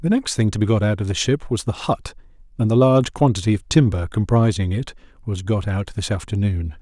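No technical fault can be heard anywhere in this speech recording. There is nothing to place on a timeline.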